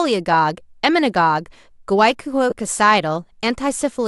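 At 2.50 to 2.52 s the speech briefly turns into a noisy smear: for about 20 ms the clear tonal quality collapses into a grainy hiss that still roughly follows the sound's overall colour, then normal audio resumes. These are lost LE Audio frames. The gap fits two 10 ms Bluetooth frames that never arrived, and the LC3 decoder filled them by repeating the last received spectrum with randomised signs, which keeps the level but scrambles the harmonic structure into noise.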